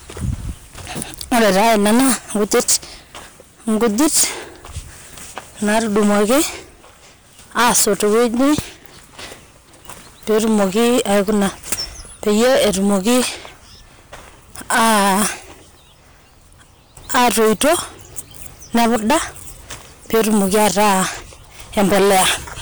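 Hard clipping runs through the whole speech clip. The signal is overdriven by about 21 dB, so roughly 15% of the samples are sheared flat, giving harsh fuzz on every loud syllable.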